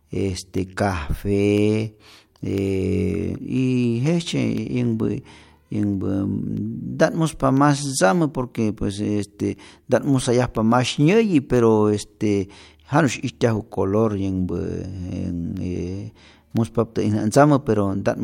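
A regular tick recurs once per second from 0.58 s to 17.57 s, audible only while the speech is sounding. These are periodic USB or driver dropouts: at each tick a sliver of audio, only a small fraction of a millisecond, is replaced by silence. The evenly spaced timing points to a background task that stalls the USB bus or audio driver on a fixed one-second cycle.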